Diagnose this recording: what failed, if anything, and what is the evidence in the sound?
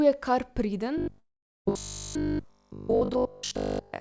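Robotic sound from repeated short buffers runs from 0.98 s, right after "je kar priden", to the end at 4.01 s. This is a buffer-stage fault. All of the audio in that span becomes a rigid 50 Hz buzz, which fits the likely cause: a 20 ms block being replayed while the fresh audio is skipped.

A long network dropout sits at 1.20–1.67 s. About 460 ms of audio never arrived, most likely lost in transit. The receiver extended the last sound briefly before it decayed into roughly 410 ms of silence, and playback then resumed later without the lost section, over a G.722 path with nothing above 8 kHz.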